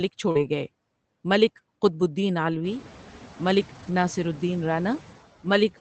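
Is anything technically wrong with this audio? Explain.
Yes. Throughout, the background sound sinks between phrases and swells under them. These are noise suppressor artifacts: frame-by-frame band gains pull steady noise down by about 11 dB. The effect is clearer once the room noise rises around two and a half seconds in.

From 0.31 to 0.37 s a brief smear replaces the sound. This is short concealed packet loss: about 40 ms never arrived, and the decoder extended the preceding sound for 36 ms before blending back.

At 0.35 to 0.37 s, again at 2.53 to 2.55 s just after "ملک قطب الدین", and for a longer stretch from 3.75 to 3.93 s, the audio turns briefly rougher and noisier without any gap. Each is a lost packet rebuilt from error correction. The following Opus packets carried low-bitrate copies, and the longest, 100 ms, comes from five separate lost packets.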